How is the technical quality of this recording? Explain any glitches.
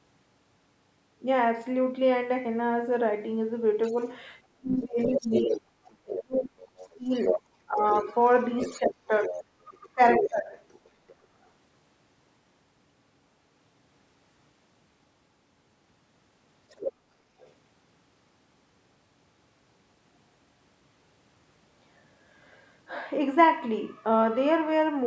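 The recording has a constant comb-filter colouration plus a cluster of echo-canceller problems: leakage from the far end, speech ducked during double talk, and one short gate on the background.

Channel delay (comb filtering) runs through the whole clip. One channel lags the other by only a few samples, well under a tenth of a millisecond, and the two are summed to mono. Content common to both cancels at regularly spaced frequencies, with the first notch near 7 kHz. The result is a slightly dulled, phasey top end. On a spectrogram this shows as a fixed dark band near 7 kHz that stays put regardless of the speech. It sits just below the 8 kHz ceiling left by the call's normal microphone processing.

The other side's voice leaking through occurs at 3.83–3.93 s (about 30 dB below the speech), 4.98–11.49 s (only about 5 dB below) and 16.69–17.52 s (about 10 dB below). The likely cause is far-end audio from a loudspeaker that the echo canceller failed to fully remove from the microphone. 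You hear a second voice underneath. On a spectrogram it appears as a separate set of harmonics overlapping the main talker, clearest in the long middle stretch.

Speech suppressed in double talk coincides with that leakage, at 3.91–3.96 s, 4.56–7.11 s, 7.66–7.84 s and 8.79–10.53 s. The dips are about 5, 30, 15 and 20 dB deep, most likely because the canceller could not separate the talker from the echo and turned both down. The voice sags, loses its brightness or breaks into pieces. On the waveform the envelope is carved into sudden troughs, and the spectrogram shows the upper harmonics fading first.

Background gated by the echo canceller happens at 17.12–17.33 s, near the end of the last leakage burst. The canceller clamps the microphone while the loudspeaker is active, so the room tone drops by about 10 dB for roughly 200 ms and then comes back. The waveform shows a brief notch in the noise floor, and the spectrogram a short vertical gap in the low-level background.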